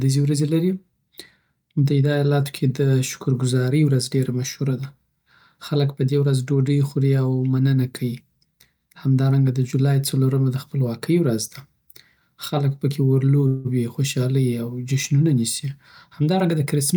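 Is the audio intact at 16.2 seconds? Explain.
No. From 16.11 to 16.93 s a jitter buffer speed-up trims pitch-period slices, about 70 ms in all, so the speech runs 7% faster and sounds hurried, yet unlike resampling its pitch stays unchanged.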